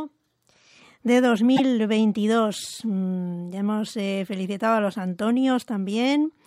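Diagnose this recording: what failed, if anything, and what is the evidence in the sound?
At the codec stage, frames were likely dropped, breaking the MP3 bit reservoir. The speech skips ahead, with a brief corrupted stretch from 1.56 to 1.60 s.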